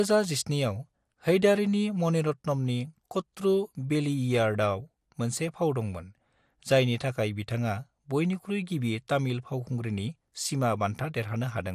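Throughout the speech, the sound is dull, with gurgling, granular distortion. This is likely MP2 compression starved of bits, fitting about 80 kbps, switching off upper sub-bands.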